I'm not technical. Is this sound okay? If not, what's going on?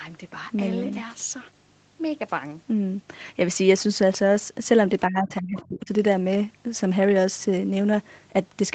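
No. Between 5.07 and 5.91 s, the call's echo canceller likely mistook this talker for echo while both sides spoke at once, and turned them down. This is speech suppressed in double talk: the voice sinks sharply.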